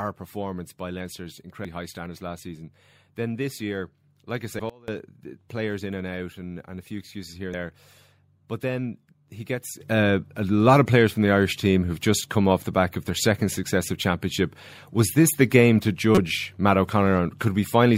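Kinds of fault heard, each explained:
Damaged data in a compressed stream: Brief chirps and blips cut into the speech at 1.65 s, just before "high standards last season", and again at 4.59 s, 7.54 s and 16.15 to 16.18 s, the last one longer. Each comes from corrupted bytes in the compressed stream: the decoder misreads the broken frames, loses sync, and outputs a short burst of garbage while it hunts for the next valid frame header.
Sudden gain jump: At 4.70 s the level drops abruptly by about 23 dB for roughly 0.19 s, right before "the players in and", then snaps back. After "then he gets" at 9.80 s, it leaps up by about 12 dB and stays there to the end. Voice and background noise move together with no fade, which points to a digital gain change likely applied from one sample to the next without any ramp.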